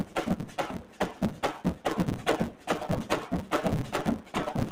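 From the first moment to the end, a noise suppressor applied to music or sounds is at work. A processor tuned for speech treats held tones, ambience and tails as noise and pulls them down. Onsets mostly survive. Sustained parts and decays sink, so the level pumps and thins. The swing between passed and suppressed material is large, around 15 dB. The sound flutters and never holds a steady body.

A block size mismatch (truncated) also runs throughout. One stage writes longer blocks than the next one reads. The tail of every block is dropped. This chops the audio at the block rate and leaves a steady buzz at 150 Hz. The missing pieces make everything run fast, at 1.6 times normal speed, with pitch left about where it was. This fits blocks of 512 samples being cut short.

Sound cut by the noise suppressor occurs six times. The spans are 0.04 to 0.16 s, 0.45 to 0.58 s, 0.78 to 1.00 s, 1.75 to 1.85 s, 2.50 to 2.68 s and 4.20 to 4.35 s. 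In each one the suppressor mistakes the sound for noise and drops it harder than its surroundings, by about 10 dB at the deepest point. Fading and steady parts lose most, and their decays end early. Each dip affects roughly 0.15 to 0.4 s in total.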